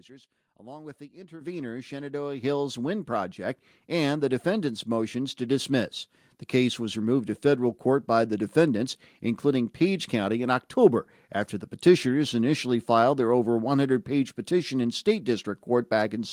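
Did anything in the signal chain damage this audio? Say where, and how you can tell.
Yes. Call processing stepped up the microphone volume by about 10 dB at 1.41 s and about 6 dB at 2.43 s. Speech and background jump together.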